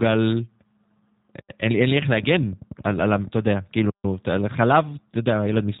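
G.729 codec damage runs through the whole recording, from the first second to the end. The speech has been rebuilt from a compact model rather than carried as a waveform: a filter shaping the vocal tract, a predictor supplying pitch, and a few coded pulses per 10 ms frame. Nothing above 4 kHz survives, so sibilants sound dull. The voice has a plainly audible rough, slightly synthetic edge, which fits an 8 kbit/s G.729A stream.

A train of clicks runs from 2.14 to 3.28 s: about fifteen near-identical pulses at a steady 10.6 per second, each roughly as loud as the speech itself. The ticking sits on top of the audio and carries on through any gaps. The even spacing and uniform shape point to something repeatedly injecting a pulse into the signal path, likely electrical interference from nearby equipment or a faulty connection or power supply.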